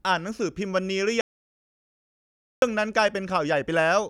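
From 1.21 to 2.62 s the speech cuts out mid-flow in an audio dropout to silence, about 1.41 s of dead silence. Unlike a natural pause or noise gate, no room tone remains. The input was likely lost while recording continued.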